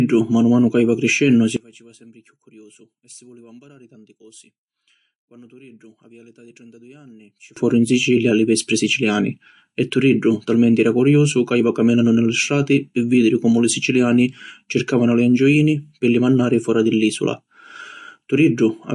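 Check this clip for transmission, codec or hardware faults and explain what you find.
Two faults are audible: codec damage across the whole recording and a six-second stretch where the speech collapses when summed to mono.

MP3 compression, throughout: nothing is present above 11.3 kHz, and the damage is plainly audible, which fits a low bitrate around 48 kbps. Short of bits, the encoder cuts the treble and drops weak frequency lines frame by frame, leaving speech dull and watery, with swirling sibilants and smeared consonants.

One channel inverted, 1.57 to 7.57 s, just after "manu ca jiva criscennu" until "foru in": the level falls by about 29 dB, likely because one side's polarity is reversed. When the two channels are summed, their shared, centred content cancels, leaving only a faint residue of the speech.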